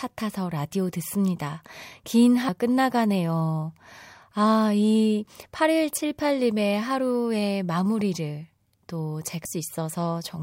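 At 2.49 s and again at 9.45 s the speech is hit by damaged data in a compressed stream: the decoder misreads corrupt frames and loses sync, producing a brief blip. On a spectrogram each shows as a thin vertical break, and on the waveform as a sudden discontinuity.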